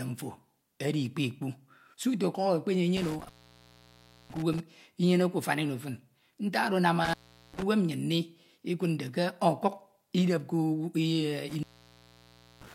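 An intermittent contact breaks the speech three times: 2.97 to 4.60 s, 7.05 to 7.63 s, and 11.49 s to the end. A loose cable or plug opens the line for about 1.0 s, 0.40 s and 0.99 s. The sound drops out, with crackle at the edges.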